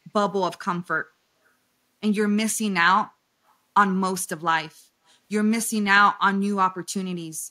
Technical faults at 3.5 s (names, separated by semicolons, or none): echo leak